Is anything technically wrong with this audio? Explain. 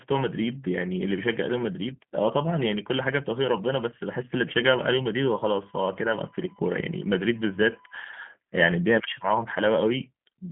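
Yes. Throughout the speech, the signal has passed through a low-rate G.729 codec, which fits the 8 kbit/s VoIP rate. The codec models each 10 ms frame with a vocal tract filter, a pitch predictor and a few pulses, discarding the rest of the waveform. The line band runs from 150 Hz to 3.4 kHz, with nothing above 3.8 kHz. The voice is plainly rough and synthetic, thin and muffled at the top, with a buzzy, reconstructed texture.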